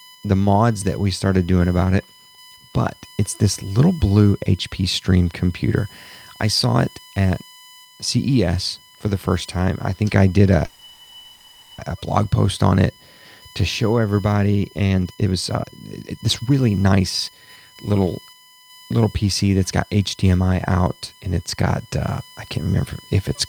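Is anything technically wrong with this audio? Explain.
Yes, three faults can be heard.

A USB whine runs through the whole clip. It is a fixed tone at 1 kHz, strongest at its harmonic at 3 kHz, roughly 30 dB below the speech. Current drawn by the USB bus in 1 ms frames leaks into the audio through power or ground. That produces this steady pitch.

A call audio freeze occurs from 10.65 to 11.80 s. The last sound is stretched into a buzzing hiss that fades without going silent. The likely cause is delayed packets draining the jitter buffer. About 1.13 s is inserted, and nothing is lost.

A jitter buffer speed-up runs from 14.90 to 18.73 s. The speech plays at about 129% speed with its pitch unchanged, so it sounds hurried. The receiver trims many short pitch-period slices to work off the built-up delay. Around one second is removed in total.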